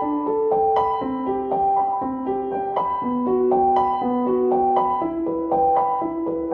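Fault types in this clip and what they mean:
Nothing stood out as a fault on listening to these sounds.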